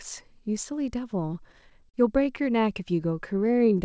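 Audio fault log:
1.34–1.96 s, repeated stalls (stutter): the audio halts seven times, the longest for about 40 ms, with about 97 ms of stretched sound filling roughly 16% of the span. Late packets kept draining the jitter buffer, so the receiver extended the last sound each time. Nothing is lost, but the passage drags and stutters.
3.34–3.78 s, jitter buffer slow-down: the audio plays at about 87% speed at unchanged pitch, adding 65 ms. The receiver repeated single pitch periods to rebuild its buffer reserve, so sounds come out drawn out.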